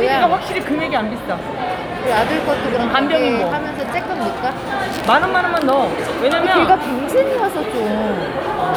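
Everyday sounds, with no technical faults heard anywhere in the recording.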